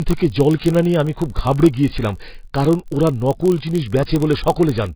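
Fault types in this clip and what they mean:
AAC compression: The speech was likely passed through a low-bitrate AAC-LC encoder, consistent with something near 16 kbps, which has to discard most of the spectrum to fit. The effect is heavy. The high-frequency cut-off is lowered, so the speech sounds muffled and dull, and the coarse quantisation smears what remains, giving sibilants and sustained vowels a watery, warbling, fizzy texture instead of clean detail.
Filter restarted on every block: A filter in the chain is discarding its internal state at each processing block and starting again from zero. The resulting tiny transient at the start of every block repeats at about 46.9 Hz, which fits a 1,024-sample block. This is heard as a low, steady buzz riding under the speech. It grows louder when the speech is loud and fades in quieter passages because it follows the signal's level.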